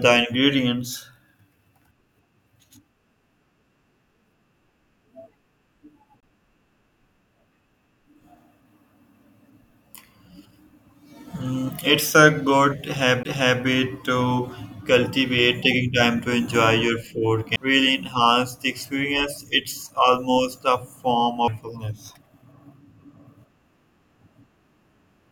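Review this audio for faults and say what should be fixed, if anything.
There are four CD skips, at 6.20–6.23 s, 13.23–13.25 s just after "it's a good", 17.56 s just before "really enhance the experience", and 21.48 s after "almost a form". Each time the laser jumps tracks, the audio mutes for about 3 to 20 milliseconds with a tick or short gap, and playback resumes one or more disc turns away. Re-rip the disc on a steady, isolated drive with error-correcting extraction.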